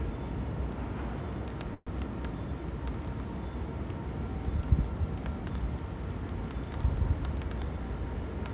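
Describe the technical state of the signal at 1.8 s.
At 1.8 s the everyday sound halts in what is likely a call audio freeze, from 1.74 to 1.89 s: a fading buzz holds the last sound for about 125 ms, then about 30 ms of silence. Nothing is lost, but everything after plays 125 ms late. On a spectrogram this shows as a smeared band that fades and then a blank column, all below the 4 kHz ceiling of the call path. On the waveform it is a decaying stretch followed by a flat gap.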